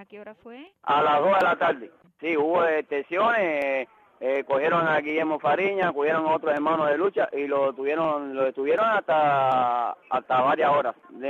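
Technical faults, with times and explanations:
0.67–11.0 s, clock drift buffer slips: a short click or pop recurs every 0.74 s, about fifteen times across this span, each time there is signal. The likely cause is two devices running on separate clocks that differ by roughly 500 ppm, so the buffer between them drifts until a small block of around 15 samples is dropped or repeated. On a waveform each slip is a tiny step discontinuity; on a spectrogram it is a thin vertical broadband line, evenly spaced.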